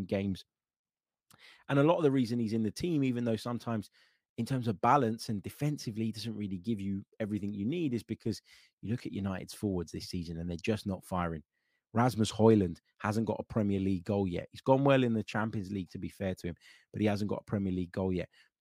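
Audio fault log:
No fault to log in this speech clip.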